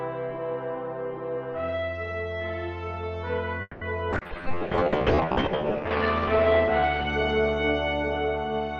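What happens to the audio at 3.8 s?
At 3.8 s the audio is inside a call audio freeze running from 3.61 to 3.84 s: the last sound is stretched into a fading buzz or hiss for about 200 ms, then 30 ms of silence. Delayed packets likely drained the jitter buffer; playback resumes where it stopped, nothing lost, 200 ms later.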